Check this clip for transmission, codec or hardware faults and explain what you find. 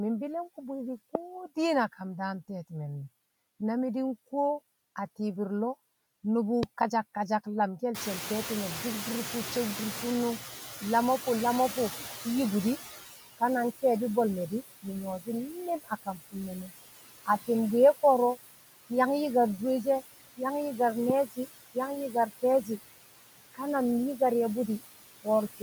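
Four kinds of fault turn up, mostly around the noise suppressor, plus some sharp clicks.

Noise suppressor artifacts run through the whole clip. The background is pulled down by about 17 dB frame by frame, so the leftover noise dips between phrases.

There's a loud pop at 1.15–1.17 s, at 6.63–6.65 s just before "kasak kasak lamke̱l", and at 21.10–21.12 s. Each is a single hard click around 20 dB above the speech, likely a voltage spike from a plug, switch or driver glitch.

The noise suppressor is catching up from 7.94 to 12.96 s, between "kasak kasak lamke̱l" and "ka na". The room noise jumps by about 23 dB near 8 s, and the suppressor's estimate takes about 5 s to follow. The noise comes through with less reduction at first, then settles to about 13 dB of reduction.

Speech is cut by the noise suppressor between 15.84 and 16.71 s, losing about 0.3 s in total with dips of up to about 20 dB. 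It happens again at 21.26–21.38 s, right after "yang yi̱kar", with a drop of about 16 dB. In both places the suppressor mistook quiet speech for noise, so those bits sound swallowed.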